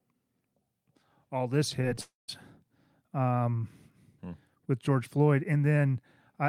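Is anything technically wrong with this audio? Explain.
Yes, there are two kinds of fault in this speech, all just after "all this".

Short concealed packet loss occurs at 1.81 to 1.85 s and again at 1.95 to 1.99 s. Each time about 20 ms of audio failed to arrive, and the decoder patched the gap by extending the preceding sound before blending back, heard as a brief smear or wobble.

A long network dropout follows from 2.01 to 2.30 s, where roughly 0.28 s of audio is lost, likely from an interruption in delivery. The receiver continues the last sound as a fading buzz or hiss, then about 0.16 s of silence remains before the speech resumes with that portion missing.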